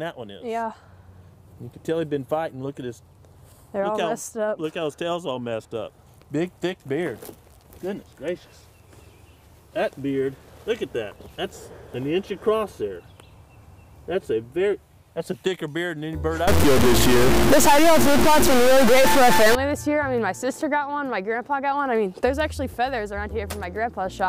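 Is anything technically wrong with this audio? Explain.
Yes. From 16.48 to 19.55 s the audio turns harsh and buzzy, a sign of a stuck bit. The likely cause is one data bit held at a fixed value by a broken line or converter. Roughly half the samples are then wrong by that bit's weight, here a step of about -10 dBFS. This is a high bit, so the error is large. Quiet stretches fill with loud noise as small values cross zero.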